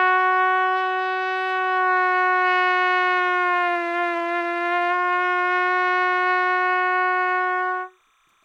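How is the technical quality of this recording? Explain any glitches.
The recording has one fault: timecode bleed runs through the whole clip. Linear timecode at 29.97 frames per second leaks in, switching between roughly 1 and 2 kHz. It's a faint, steady chirping warble, about 40 dB below the sound.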